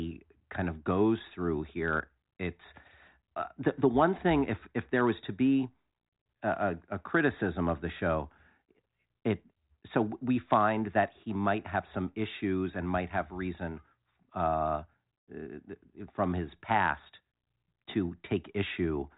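No faults are audible in the speech; it runs through G.726 ADPCM at 40 kbit/s, so the band stops at about 3.8 kHz and any coding noise is faint at most.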